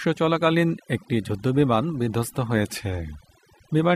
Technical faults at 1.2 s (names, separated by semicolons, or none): overdone noise removal